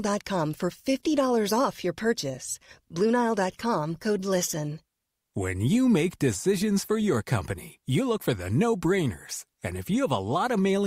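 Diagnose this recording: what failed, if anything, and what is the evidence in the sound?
Nothing in the recording points to a failure at any stage of the signal chain: the speech signal stays continuous and stable, with no audible break, distortion or disturbance anywhere in it.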